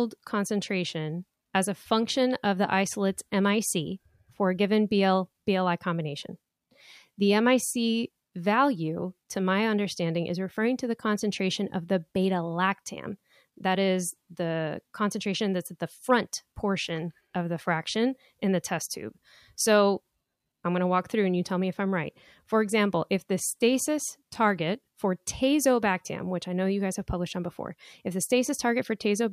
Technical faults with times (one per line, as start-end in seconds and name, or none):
none